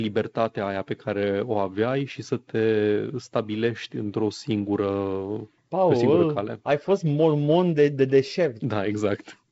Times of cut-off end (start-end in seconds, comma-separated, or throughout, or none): none